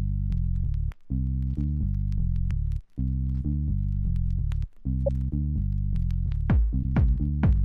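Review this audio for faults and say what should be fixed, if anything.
Two short corrupt frame decoded events stand out: one from 5.06 to 5.09 s, and a quicker one at 6.83 s. Each is a brief glitch that doesn't belong to the surrounding sound. The first is fairly loud and the second a bit softer. What's happening is that bits got flipped inside compressed frames and the decoder played them anyway, so misread gains and codes dumped energy at wrong frequencies. The length of each burst fits a handful of damaged frames. To prevent it, add integrity checks so that frames failing validation are concealed instead of decoded.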